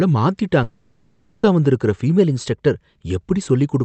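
From 0.63 to 1.45 s, a long network dropout likely cut off the incoming stream, and the receiver filled about 0.8 s with concealment. The last sound smears into a fading buzz or hiss, never true silence, and the speech resumes with that stretch missing.

Between 2.18 and 3.00 s, a drift correction step likely made the clock-matching software jump the playback rate 5.75% faster to drain its buffer. Speed and pitch rise together, about 97 cents, close to a semitone, before snapping back.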